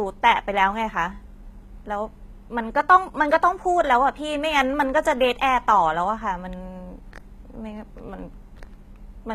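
From start to finish the speech carries plainly audible codec damage, likely from HE-AAC compression at a low rate, which fits a bitrate near 20 kbps. Only the lower band is truly coded; the treble is rebuilt by copying lower bands upward, so s sounds turn gritty and metallic, their harmonics misaligned above the crossover. A spectrogram shows smeared, repeated-looking upper bands and nothing above 14.9 kHz.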